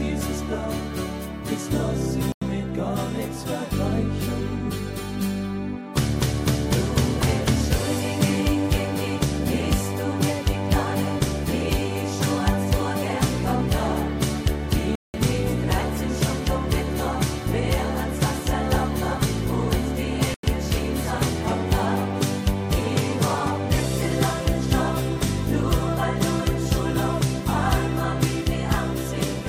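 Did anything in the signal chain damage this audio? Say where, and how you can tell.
Yes. Blocks of digital silence at 2.32 to 2.42 s, 14.95 to 15.14 s and 20.34 to 20.43 s: the sound cuts hard to silence and back. Holes of 93, 186 and 93 ms fit whole 4096-, 8192- and 4096-sample buffers left unfilled at the driver or buffer stage.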